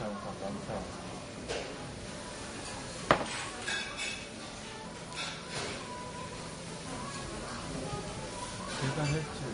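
From start to finish, nothing sits above about 10.6 kHz, and the top end has a smeared, swirly quality with two different kinds of artefact layered together. That's likely transcoding between lossy codecs, an MP3 re-encoded to Vorbis, both at low bitrates around 40 kbit/s.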